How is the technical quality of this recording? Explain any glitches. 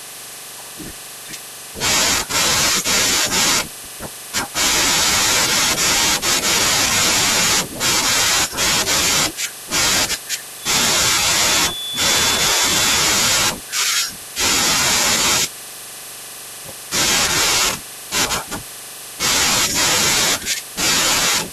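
There's one glitch worth flagging in this speech recording, a feedback whistle from about 10.55 to 13.15 s. A thin, steady tone at 3.5 kHz sits behind the speech there, roughly 10 dB under it, swelling and fading slowly in level. The likely cause is the speaker-to-mic loop hovering right at the edge of feedback: just enough gain that one frequency keeps ringing, but not enough for it to build into a full howl.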